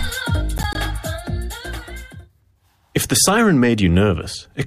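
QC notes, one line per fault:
0.58–0.78 s: processor overload crackle, a burst of gritty tearing as several roughly 10 ms buffers miss their deadlines and drop to silence, leaving hard-edged gaps.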